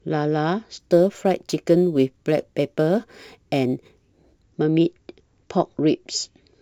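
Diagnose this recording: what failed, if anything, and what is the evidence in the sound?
Crude rate conversion at the sample-format stage, 0.80 to 4.42 s: an inharmonic fizz that follows loud speech and, unlike clipping, isn't harmonic. Repeated samples suggest 44.1 to 48 kHz.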